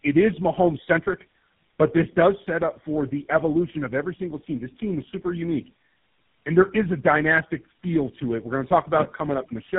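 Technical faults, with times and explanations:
Throughout: tandem speech coding. The speech is rougher, more muffled and more warbly than a single narrowband codec would leave it, and nothing reaches above 3.8 kHz. The warble and roughness suggest about three low-rate speech coders in a row, with GSM-style full rate at both ends and AMR-type coding between, each reworking the previous one's errors. A single low-bitrate pass would sound thin, but it would not pile up this much layered distortion.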